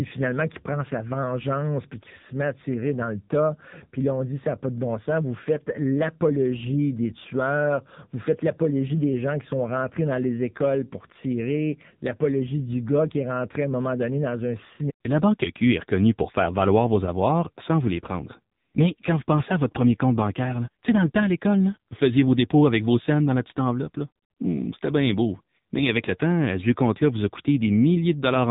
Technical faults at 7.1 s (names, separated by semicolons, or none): AMR narrowband mobile codec